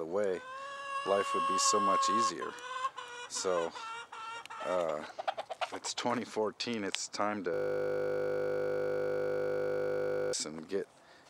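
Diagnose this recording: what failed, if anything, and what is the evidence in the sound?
From 7.54 s to 10.33 s the sound stops moving and turns into a steady buzz at 50 Hz. That is a system hang loop at the driver or buffer stage. The host or driver froze, while the audio hardware kept replaying the last 20 ms segment left in its ring buffer, about 140 times in a row. A loop that short repeats too fast to hear as stuttering, so the repetition rate itself is heard as a fixed buzz at 50 Hz.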